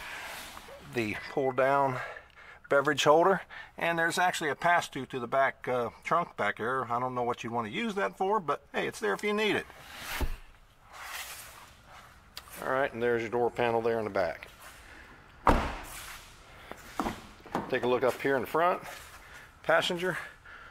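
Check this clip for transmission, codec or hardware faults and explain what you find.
There is one hardware-side fault, processor overload crackle, from 0.42 to 0.70 s. The processor repeatedly missed its deadlines for very short buffers, which fits a buffer of around 1.5 ms. About ten buffers dropped to silence, leaving hard-edged gaps heard as a brief gritty crackle.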